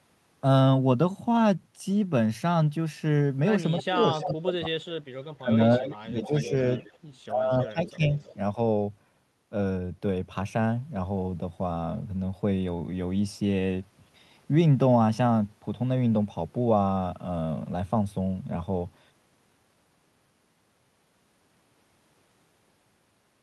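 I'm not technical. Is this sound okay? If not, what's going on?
No. Echo leak appears at 3.79–3.83, 4.21–4.34, 5.85–5.89, 6.22–6.97 and 7.63–8.35 seconds. A faint copy of the voice returns about 0.31 seconds late. The other caller is likely on a loudspeaker whose echo canceller let some of its own playback slip back into the line.

Speech suppressed in double talk happens at 3.88–4.99, 5.40–6.52 and 7.31–8.12 seconds, where the voice sinks sharply or drops out in pieces. With both sides talking at once, the echo canceller likely couldn't tell the real talker from echo, so it turned everything down.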